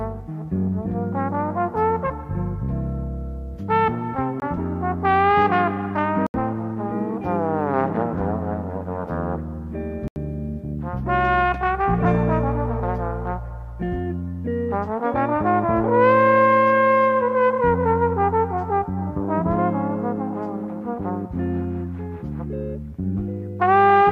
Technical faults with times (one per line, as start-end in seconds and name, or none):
4.40 block of digital silence
6.26-6.34 block of digital silence
10.08-10.16 block of digital silence